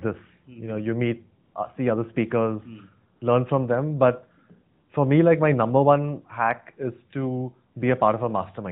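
At 1.44 to 1.54 s, just before "uh see other speakers", at 3.16 to 3.22 s, before "learn from them", and at 4.74 to 4.90 s, before "for me like my", AMR comfort noise replaces the real background. In these brief pauses the phone stopped sending speech frames, and the receiver filled the gaps with smooth synthetic noise. Unlike a dropout or noise gate, the gaps are not silent but hold a steady, featureless hiss that switches in and out, over narrowband speech with light codec damage.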